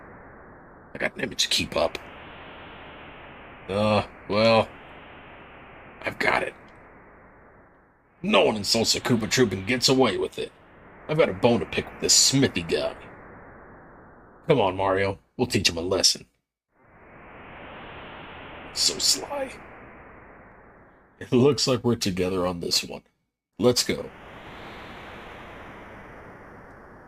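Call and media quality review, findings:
Crude rate conversion, 21.66 s to end: gritty inharmonic fizz tracking loud, bright passages, about 20 dB under signal. Nearest-sample repeating, consistent with unfiltered 44.1 to 48 kHz resampler.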